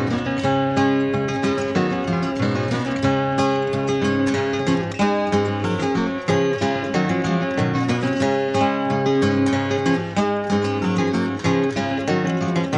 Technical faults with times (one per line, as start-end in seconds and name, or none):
none